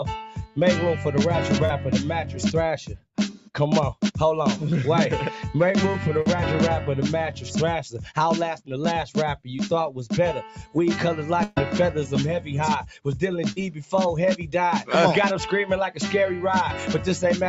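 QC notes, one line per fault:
Throughout: noise suppressor applied to music or sounds. A suppressor tuned for speech stays active on this material, treating steady tones, ambience and decaying tails as noise and pulling them down by a few dB, while onsets pass nearly intact. The level pumps and thins in step with the material rather than at fixed points. Unlike packet loss, nothing is replaced or missing; the sound is simply held down, with content above 8 kHz absent as the call band allows.
0.29–0.57 s, 2.93–3.49 s, 10.55–10.76 s, 13.71–13.91 s: sound cut by the noise suppressor. At each of these spots the suppressor judged a sustained or fading passage to be noise and cut it harder than elsewhere, by about 12, 11, 11 and 9 dB. Held portions sink and tails end early, while attacks inside the window mostly survive. This differs from packet loss because the sound's character is unchanged, only its level drops.
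1.65 s, 6.21 s, 13.52 s: short concealed packet loss. About 40 ms of audio failed to arrive each time, and the receiver filled the hole by extending the preceding sound before crossfading back into real audio. Each is heard as a brief smear or wobble where a short transient can disappear. Unlike the suppressor dips, the texture momentarily turns artificial.
11.43–11.58 s: burst of packet loss. Roughly 140 ms went missing in a run, far longer than the short gaps. The receiver kept continuing the last sound for about 130 ms, letting it fade as the gap lengthened, so it comes across as a held buzz or decaying hiss, then the audio jumps ahead with that stretch lost. The longer, fading fill and the audible skip set it apart from the brief smears elsewhere.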